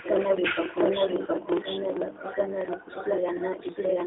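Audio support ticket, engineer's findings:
Doubled audio track, whole clip. Speech repeats about 0.7 s behind itself, at roughly equal level. The copy is dry and full-band with no decay or room colour. Likely cause: a second, slower capture path mixed in alongside the first.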